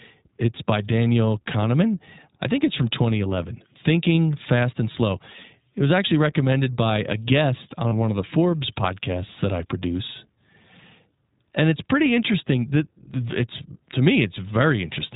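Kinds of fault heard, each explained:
iLBC codec: The speech passes through a narrowband VoIP codec that codes each 20 ms frame's excitation independently, which fits a rate near 15.2 kbps. Nothing above 4 kHz survives, and the coding damage is plainly audible as a rough, synthetic edge on the voice.
Lost iLBC frames: Around 7.88 to 7.94 s, between "recommended by a guest" and "one of the", about 40 ms of audio drops out, consistent with two lost frames. The decoder fills the gap by repeating the last pitch cycle mixed with noise, giving a brief held vowel, then recovers at once.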